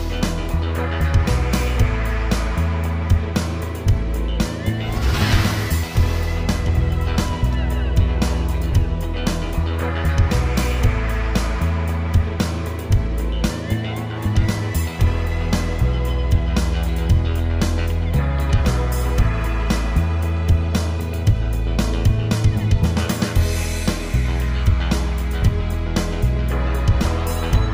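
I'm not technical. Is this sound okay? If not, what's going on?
Yes, this sound is okay, with nothing wrong to point to anywhere in the clip. There's no problem here that needs explaining or fixing.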